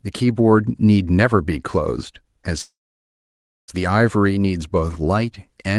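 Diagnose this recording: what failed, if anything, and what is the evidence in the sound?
The failure is a call audio freeze at the network and jitter-buffer stage. From 2.61 s to 3.70 s the speech stops; the last sound carries on briefly as a fading buzz or hiss, then about 0.95 s of silence before speech resumes where it left off. Nothing is lost, but about 1.07 s of extra delay is inserted. The likely cause is packets held up in transit draining the jitter buffer, with the receiver concealing the gap. The band-limited sound, up to about 12 kHz, fits the Opus call codec.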